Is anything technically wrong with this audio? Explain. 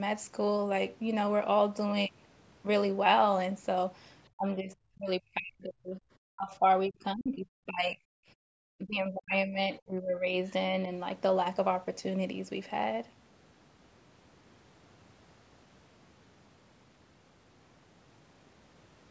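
Yes. Between 4.36–6.04, 6.24–6.65, 6.87–8.0 and 8.78–10.33 s, the speech sinks by roughly 25 to 40 dB in chunks: speech suppressed in double talk, likely the echo canceller ducking both overlapping talkers. Unlike simple gating, the voice itself is hollowed out.

From 8.34 to 8.5 s, the room tone drops by about 34 dB. This is background gated by the echo canceller, a brief clamp while the loudspeaker played.

At 10.48–10.52 s a faint scrap of the other side's voice leaks through, about 35 dB below the speech, likely residual loudspeaker echo the canceller missed. It is added sound, not lost sound.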